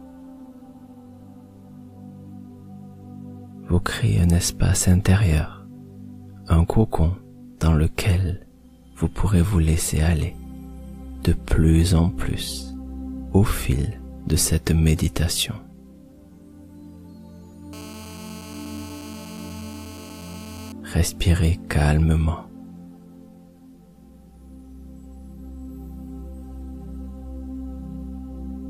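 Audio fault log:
17.73–20.72 s, GSM phone buzz: a hard, raspy buzz at about 217 Hz, thick with harmonics, holds at a steady level for roughly three seconds, sitting about 20 dB below the programme and bearing no relation to it. A nearby 2G handset on a call was transmitting in pulses 217 times a second. The audio circuitry rectified those radio bursts into the signal path, so the pulse rate itself became an audible, harmonic-rich tone.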